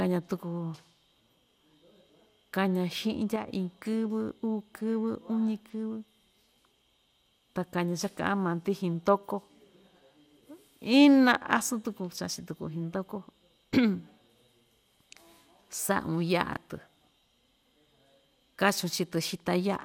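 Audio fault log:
3.36 to 3.48 s, sudden gain jump: at 3.36 s the level of the speech and the background noise under it falls by about 6 dB in a single step, with no fade, and it stays at that level until 3.48 s. Because both drop together and at once, the change sits on the whole signal rather than on the talker, most likely a digital gain setting or bit shift applied without a ramp.
16.53 to 16.57 s, chunks out of order: for about 30 ms the speech is briefly jumbled. A block of roughly 10.7 ms plays two blocks later than it should, after the two that belong behind it. No audio is missing, but the wrong order creates three hard joins where the waveform doesn't line up.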